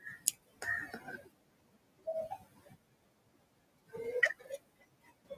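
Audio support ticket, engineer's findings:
Noise suppressor artifacts throughout. Residual background pumps down between phrases, swells back under speech. Suppressor gain tracking frame by frame, pulling down bands judged stationary noise. Room noise itself sits about 20 dB below speech, audible beneath as the thing being chased. Component: noise suppression stage. Mechanism: per-band gain decisions fluctuating between frames, so leftover noise modulates instead of staying steady.

Speech cut by the noise suppressor at 0.00–0.64 s, 0.88–2.07 s, 2.29–3.94 s, 4.34–5.37 s. Soft consonants and word endings swallowed, quiet stretches faint. Drops reach about 17 dB, 19 dB, 18 dB and 18 dB respectively. Roughly half a second, one second, one and a half seconds, and one second affected in each span. Component: same suppressor. Mechanism: low-level speech classified as noise, attenuated along with background.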